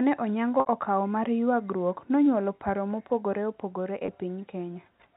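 Packet loss with pitch repetition appears twice. From 0.60 to 0.66 s, just before "okawo mar", about 60 ms of audio goes missing, which fits three 20 ms packets. The receiver fills the gap by looping the last pitch period and fading it down, so the sound briefly turns held and buzzy before the cross-fade back in. At 4.06 to 4.08 s, right after "nonyuolo paro mopogore opogore", a single 20 ms gap produces a shorter hold, heard through the 4 kHz-limited G.711 telephone band.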